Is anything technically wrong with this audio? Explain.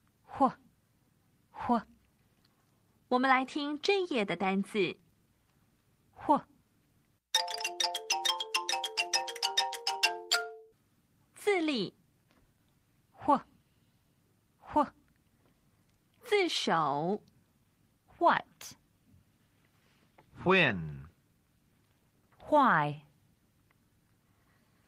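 No, nothing technically wrong can be heard here.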